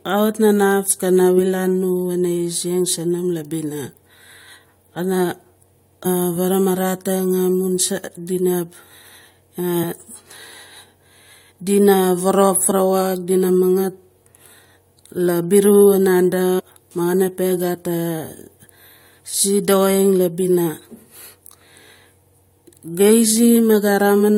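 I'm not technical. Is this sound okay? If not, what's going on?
No. The speech has four brief glitches at 6.05, 9.82 and 12.70 seconds, and from 16.58 to 16.60 seconds. Each is a tiny chirp or blip. The cause is damaged data in a compressed stream. Some of the stored data was lost or garbled. When the player reaches those spots, it cannot read them properly. It loses its place for a moment, then finds the next readable chunk and carries on.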